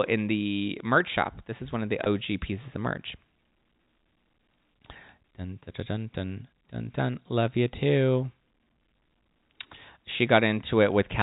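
A speech recording on a G.711 telephone line shows packet loss with pitch repetition from 2.04 to 2.06 s. About 20 ms of sound dropped out. The receiver filled the gap by repeating the last pitch period, giving a brief held, buzzy tone. The G.711 coding limits the band below 4 kHz.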